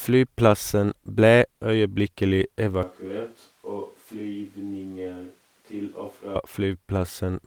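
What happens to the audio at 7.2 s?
At 7.2 s the speech carries on intact, with no dropout, click, distortion or other audible fault.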